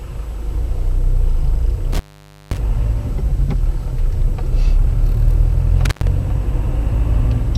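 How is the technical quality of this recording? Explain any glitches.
The recording has two dropouts from an intermittent contact. From 1.93 to 2.58 s, and again from 5.85 to 6.07 s, the sound crackles, cuts out, and leaves only faint hiss for about 520 ms and then about 100 ms. A loose cable or plug is briefly breaking the signal path.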